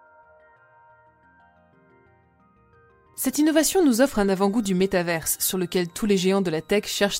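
From 3.56 s to the end, a switching supply whistle rises around 4 kHz, drifting between 3.5 and 4.1 kHz, roughly 45 dB down; spectrograms show a thin wandering line.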